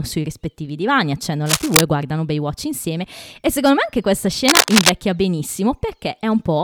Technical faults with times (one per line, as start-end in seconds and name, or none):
1.46-1.81 cable scratch noise
4.47-4.90 cable scratch noise